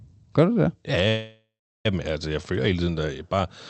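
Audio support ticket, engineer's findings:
Call audio freeze, 1.08–1.86 s: sound smears into a fading buzz, last 0.36 s silent, then resumes intact, 0.77 s late. Likely jitter buffer starved by late packets.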